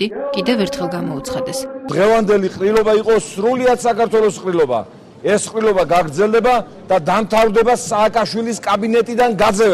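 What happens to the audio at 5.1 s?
Nothing goes wrong at 5.1 s; the audio passes through that moment intact, with no dropout, click, distortion or other fault.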